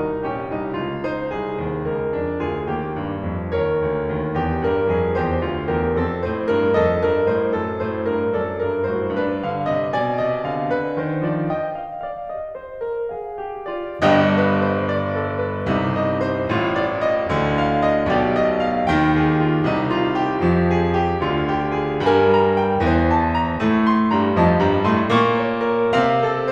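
No technical faults can be heard anywhere in the music.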